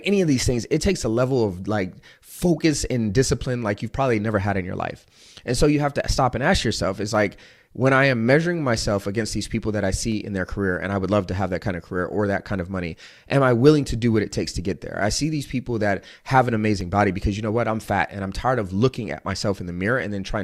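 Nothing in the speech recording points to a technical fault at any point.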